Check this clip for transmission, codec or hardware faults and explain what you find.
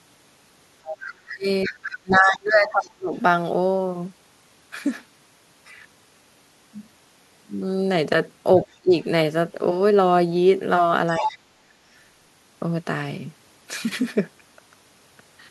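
Two echo-canceller faults appear: the other side's voice leaking through, and speech suppressed in double talk.

Other side's voice leaking through, at 0.84–0.97 s, 1.63–3.19 s, 8.64–9.05 s and 11.17–11.36 s. A second voice comes through. It is loudest near 11.2 s. This is likely loudspeaker echo the canceller missed.

Speech suppressed in double talk, at 1.04–3.13 s, 8.81–8.93 s and 11.18–11.5 s. The talker drops sharply, by roughly 35 dB at worst, while the other voice sounds. The likely cause is the canceller ducking both voices together.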